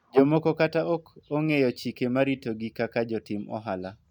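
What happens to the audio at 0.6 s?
Nothing goes wrong at 0.6 s; the audio there is intact, with no dropout, click, distortion or other fault.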